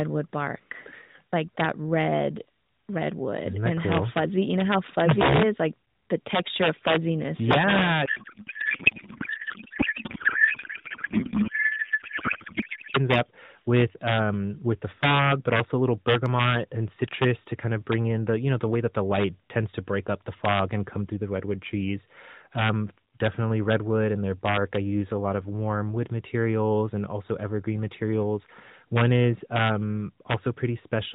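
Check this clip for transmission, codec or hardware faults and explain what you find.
One fault is present: a codec payload misread from 8.06 to 12.97 s. The speech becomes garbled noise and warble, barely following it. Octet-aligned AMR frames were unpacked as bandwidth-efficient, so every field landed wrongly. The narrowband AMR band limit below 4 kHz stays audible throughout.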